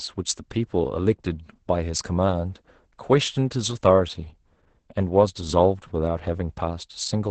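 Opus voice compression runs through the whole speech clip: the SILK linear-prediction coder has cut the band to about 8 kHz and coded the excitation coarsely, which fits a bitrate around 10 kbps, so the speech sounds muffled, hoarse and slightly robotic throughout.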